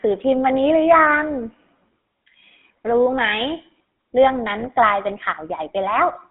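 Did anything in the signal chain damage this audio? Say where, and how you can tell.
Yes. GSM full-rate codec throughout: the speech has a buzzy, gravelly roughness and nothing above 3.5 kHz, which fits the 13 kbps pulse-excited vocal-tract model.

GSM bit errors from 4.6 to 4.67 s: a brief squawk and gargle where corrupted filter, pitch or gain values distorted a few decoded frames, pointing to a weak network link.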